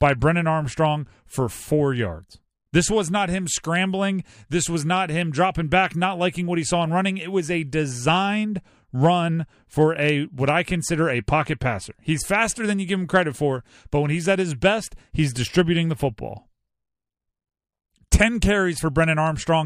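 No technical faults are audible.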